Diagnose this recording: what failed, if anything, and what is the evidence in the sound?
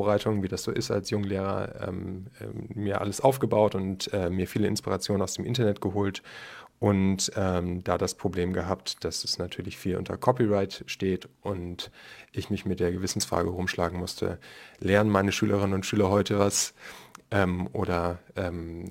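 Crude rate conversion from 11.25 s to the end of the speech: at the sample-format conversion stage, samples were dropped without filtering. The regular gaps suggest a 48 kHz to 44.1 kHz step, leaving a gritty, inharmonic fizz roughly 25 dB below the speech that tracks loud, bright passages.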